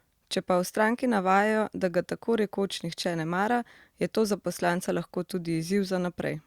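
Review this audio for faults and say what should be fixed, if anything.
Nothing stood out on listening to this speech, so there is nothing to fix.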